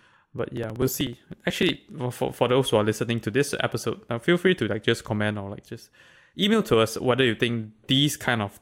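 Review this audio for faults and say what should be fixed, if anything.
Periodic USB or driver dropouts appear from 0.08 s to 1.88 s. Something on the system stalls the USB bus or the audio driver every 0.062 s, and each stall drops about 2 ms of the speech outright, with no silence in its place. That gives around thirty evenly spaced gaps, about sixteen per second, heard as a steady run of ticks that sound only while the speech is present. To prevent it, find and stop the background task or power-management feature interrupting the USB audio path, and update or reconfigure the driver.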